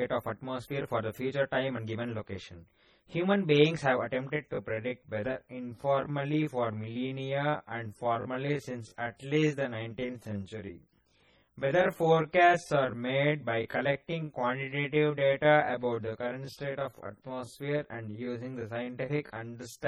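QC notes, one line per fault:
throughout: channel delay (comb filtering). One channel lags the other by roughly 20 ms, and the mono sum cancels whatever the two share at evenly spaced frequencies. The first notch sits around 30 Hz, with more following at a regular interval up the spectrum. This fixed pattern of dips gives the speech a rough, slightly doubled colour that doesn't change over the clip, because the delay stays constant.
throughout: MP3 compression. The high detail flickers from frame to frame, so the speech sounds watery and swirly. Sibilants come out with metallic chirps, and consonant onsets are smeared. This is likely heavy MP3 coding at a starved bitrate, consistent with something near 32 kbps, where the encoder drops quiet spectral lines and band-limits the signal to save bits.
4.33 to 19.87 s: time-stretched section. From 4.33 s to the end, the pace drops abruptly to about 0.741 times normal speed while the pitch stays unchanged. 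The slowed speech drags. The likely cause is pitch-preserving stretch processing that lengthened the audio by repeating short overlapping segments.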